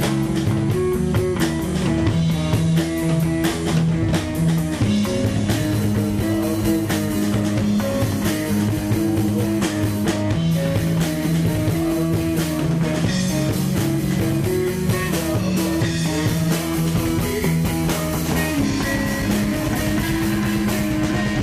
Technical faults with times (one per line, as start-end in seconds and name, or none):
none